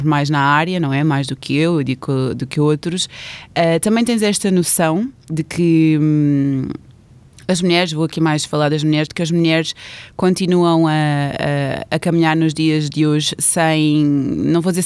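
No technical fault can be heard anywhere in the recording, and the signal holds steady throughout.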